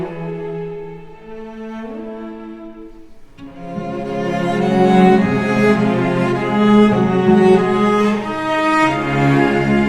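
No dropouts, clicks, distortion or timing faults turn up anywhere in the recording.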